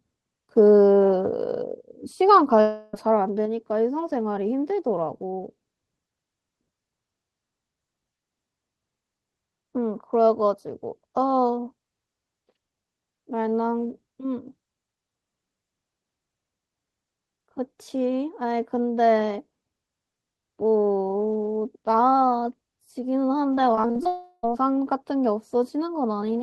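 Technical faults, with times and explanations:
2.61–2.95 s, long network dropout: About a third of a second of sound is missing. The gap is filled by a stretched continuation of the last sound, which fades as a buzz. The likely cause is a stall in arriving audio. Sound resumes later, with that part lost.
23.55–24.07 s, repeated packet loss (robotic sound): Seven short holes occur over half a second, the longest about 41 ms. Each is patched by repeating the preceding sound. About a third of this stretch is patched. The result is choppy, with pieces missing.
24.07–24.45 s, long network dropout: Straight after the choppy stretch, about 0.36 s is lost. A fading buzz carries over the gap, ending in a brief silence near its close. Sound returns afterwards without the missing part.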